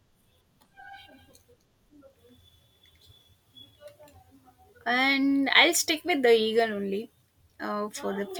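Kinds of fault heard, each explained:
Nothing here calls for a fault line; the speech comes across without any technical problems worth flagging.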